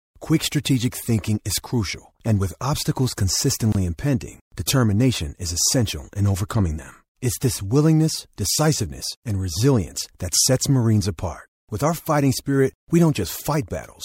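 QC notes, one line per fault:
3.72 to 3.75 s, gap at a join of encoded pieces: between "crucial and with obstacles" and "impending determination is essential" the speech drops out for about 26 ms, then resumes exactly where it left off. Two separately encoded segments were butted together with the encoder's start-up delay and end-frame padding left in. On the waveform this is a brief notch with smeared edges; the spectrogram shows a thin empty vertical stripe, its borders slightly blurred by the codec.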